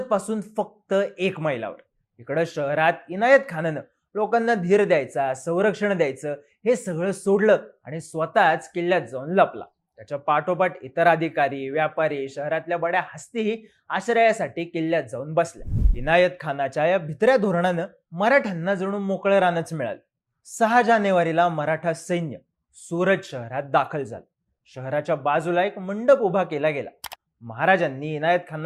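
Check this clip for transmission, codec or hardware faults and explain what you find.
Nothing in the clip points to a fault anywhere along its path. The audio stays continuous and even throughout, so there is nothing to explain.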